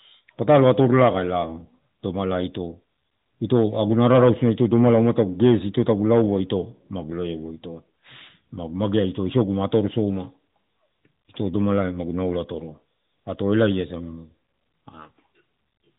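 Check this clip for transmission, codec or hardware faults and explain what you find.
One fault stands out: a short burst of hard clipping, heard against the narrowband mobile-codec sound, whose band stops near 3.8 kHz. Hard clipping occurs at 13.53 to 13.69 s. The speech peaks there overdrive a stage by about 2 dB, so their tops are cut flat. The squared-off peaks add harmonics high up the spectrum, which are heard as a brief crackle on the loudest moments.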